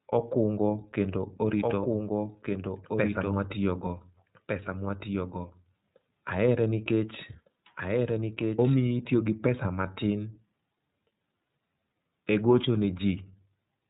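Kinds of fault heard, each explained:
iLBC codec: narrowband coding in 30 ms frames cuts everything above 3.8 kHz, leaving speech plainly rough and synthetic, unlike simple low-pass filtering, which stays smooth.
Doubled audio track: from 1.59 to 8.85 s, after "okungo kendo", a second copy trails by about one and a half seconds, roughly 5 dB quieter, likely from a duplicated capture path, with no room decay like an echo.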